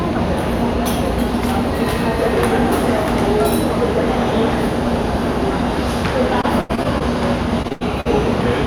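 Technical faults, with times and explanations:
6.41–7.02 s and 7.62–8.07 s, repeated packet loss (robotic sound): The audio keeps dropping out in holes up to about 80 ms, each patched by stretching the last sound. Concealment covers a quarter, then over a third, of each stretch, giving choppy sound with pieces missing.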